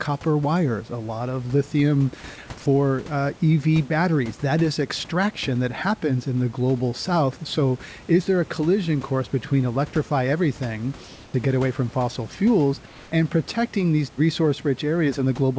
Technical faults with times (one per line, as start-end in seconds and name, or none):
11.04-11.34 comfort noise in place of the background
12.86-13.12 comfort noise in place of the background